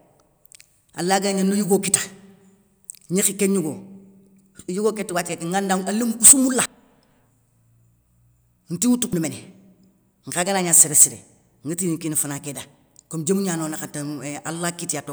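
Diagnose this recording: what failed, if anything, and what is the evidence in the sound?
Dropped buffer (overrun) at 5.29 s, 6.66 s and 9.13 s. At each point the speech jumps forward with no gap of silence, as though a slice had been cut out and the edges butted together. The first and third skips lose roughly a tenth of a second, the second closer to a third of a second. The likely cause is at the driver or buffer stage: captured samples were overwritten before the software read them.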